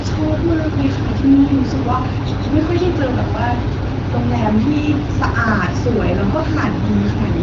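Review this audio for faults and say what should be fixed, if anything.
Nothing needs fixing, as no faults can be heard in this speech. The AMR wideband (HD Voice) codec path shows up as light coding texture and nothing above about 7.4 kHz, which fits its 12.65 kbit/s mode.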